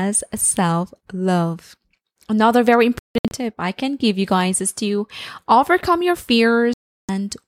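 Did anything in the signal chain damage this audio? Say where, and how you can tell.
Yes, a digital broadcast dropout at the receiver. Between 2.99 and 3.32 s the speech breaks into short silent holes, the longest 160 ms. From 6.74 to 7.09 s it goes silent solidly. Corrupt frames, seemingly about 32 ms each, were muted and lost.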